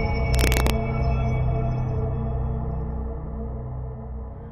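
From 0.35 to 0.70 s, integer overflow corrupts the signal: a gain or summing stage pushed the level about 2 dB beyond the largest value the integer format can hold, and instead of being held at the ceiling, those samples wrapped around to the opposite extreme. Every peak that crosses the limit jumps across the full range, so the loudest moments in that stretch break into harsh, violent cracks, far sharper and more abrupt than ordinary clipping.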